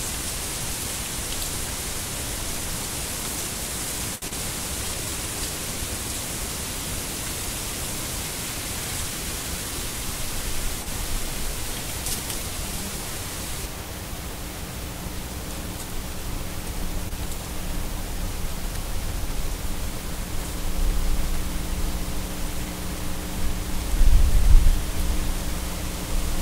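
At 4.15 to 4.24 s a short stall from a late packet holds the current sound for about 66 ms while the jitter buffer sits empty. Playback then resumes exactly where it paused, so nothing is skipped, unlike a loss. The same held-note effect returns at 10.82 to 10.88 s (44 ms) and 17.09 to 17.18 s (19 ms).

At 4.28 to 4.33 s comes short concealed packet loss. About 60 ms of audio never arrives, and roughly 29 ms of synthesized continuation bridges the gap, leaving a brief smear or wobble. Unlike a stall, real material is gone here, and the playout delay shrinks by roughly 30 ms.

From 4.75 to 5.12 s a jitter buffer slow-down stretches the sound to about 89% speed, adding 46 ms to rebuild the reserve. Pitch stays unchanged, and the drawn-out quality is spread across the stretch, rather than frozen in one spot as in a stall.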